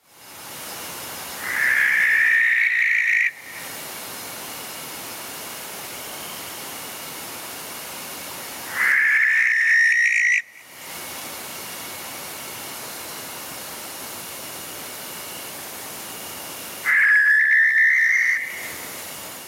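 Gain pumping runs through the whole clip. The level is pulled down as soon as a loud sound arrives, swinging by around 20 dB. Loud and quiet passages sit unnaturally close together, giving a squashed, breathing quality. The likely cause is input gain set far too high for the microphone, with a fast limiter or compressor clamping down on each peak and releasing in between.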